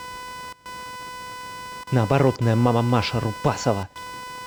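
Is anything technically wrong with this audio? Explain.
Yes. Computer activity noise runs through the whole speech clip: a buzzy, chirping whine pulsing at roughly 500 Hz, sitting around 15 dB below the speech. Processor, graphics or mouse load changes pull current through the ground the audio circuit shares, so the hum follows the computer's activity rather than the speech. A spectrogram shows a comb of harmonics spaced near 500 Hz, and the waveform shows a fine pulse train between phrases.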